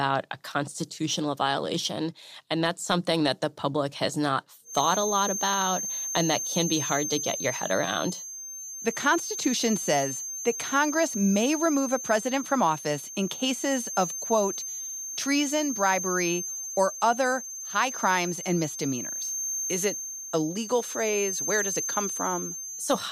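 At 4.62 s, just after "the public has not", a feedback whistle sets in. It is a thin, steady tone near 6.3 kHz sitting behind the speech. It stays about 10 dB below the speech and swells and fades slowly in level. It never builds or runs away. It carries on to the end of the clip. The likely cause is a loudspeaker-to-microphone loop held right at the edge of feedback, so one high frequency keeps ringing.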